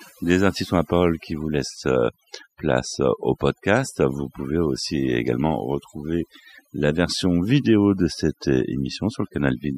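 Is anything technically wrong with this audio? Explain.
Yes. Throughout the speech there is overdone noise removal. A noise reduction stage was pushed too hard, so any frequency band sitting close to its noise estimate gets cut deeply or gated off entirely, and the softer parts of the voice are cut along with the noise. The pauses fall to near silence dotted with twinkling, chirpy specks. On a spectrogram the background shows as scattered isolated blips on a dark field, and the speech has holes and ragged edges in its upper bands.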